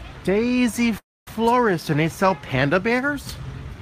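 Packets were likely held up in transit, draining the jitter buffer and causing a call audio freeze from 0.98 to 1.28 s: the last sound is stretched into a brief fading buzz or hiss, then about 240 ms of silence, before the audio resumes where it stopped, now running about 284 ms later with nothing lost.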